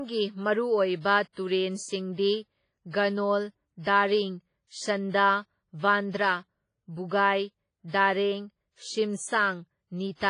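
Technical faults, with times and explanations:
Throughout, WMA compression: speech rings and smears with breathing hiss, with nothing above 10.4 kHz, which fits a likely WMA 1 encode near 24 kbps, unlike a plain low-pass.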